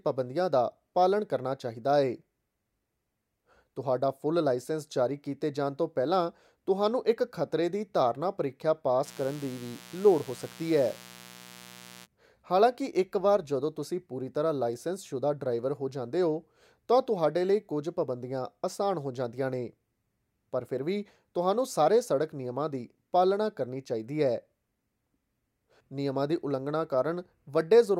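From 9.03 s to 12.07 s, after "ਖਤਰੇ ਦੀ ਧਾਰਨਾ ਪ੍ਰੀਖਿਆ" and ending before "ਹਾਲਾਂਕਿ ਇੱਕ", mains buzz sits under the speech: switching spikes twice per 60 Hz cycle leak in, producing a steady, raspy harmonic buzz about 20 dB below the speech.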